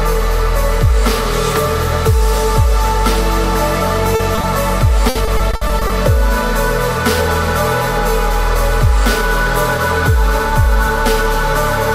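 At 4.15 to 4.21 s a short concealed packet loss fills about 40 ms that never arrived at the decoder in time. Two more follow, at 4.35 to 4.39 s and 4.41 to 4.45 s, each about 20 ms. In each case the receiver extends the preceding sound across the hole and then crossfades back into the real signal. The result is a brief smear or wobble.

From 5.09 to 5.91 s there is repeated packet loss with a robotic sound. Losses recur throughout the stretch, the longest about 60 ms, and together they make up about 240 ms, or 29% of the span. Each gap is patched by continuing the last sound before the next one arrives, so the audio turns choppy, with pieces audibly missing.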